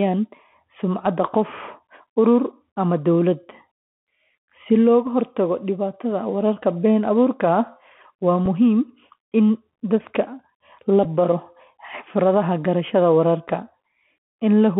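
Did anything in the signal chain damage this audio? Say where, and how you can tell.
Yes. At the codec stage, a Bluetooth CVSD headset codec narrows the whole clip to roughly 150 Hz to 3.4 kHz, which fits 64 kbps CVSD. A spectrogram shows a hard ceiling. Scratchy sibilants, slope-overload distortion on loud bright sounds and granular hiss come from its one-bit adaptive step.

At the network stage, a Bluetooth headset packet was repeated at 5.06 s, 8.46 s and 11.04 s: brief ticks or buzzy blips lasting about 7.5, 3.8 and 11.2 ms, which fits one to three lost packets. The waveform repeats a short segment.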